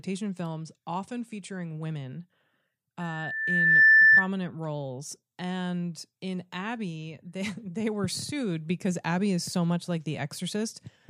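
A speech clip with loudspeaker feedback squeal from 3.0 to 4.3 s. A steady 1.8 kHz tone swells up in under a second. It then sits about 15 dB above the speech. The microphone is hearing its own loudspeaker, and the loop gain exceeds one at that frequency.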